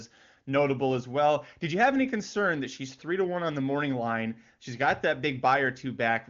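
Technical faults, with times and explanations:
No technical faults are present in this speech; it carries the band limit of an AMR wideband (HD Voice) codec, with no content above about 7.3 kHz, and the speech is as clear as the codec's top rate would give.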